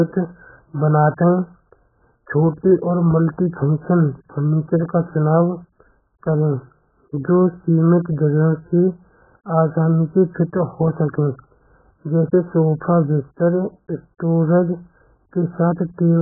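Speech, heavily band-limited throughout, with nothing above 1.8 kHz. It sounds dull, smeared and warbly. This is likely AAC compression, and the damage points to a very low bitrate.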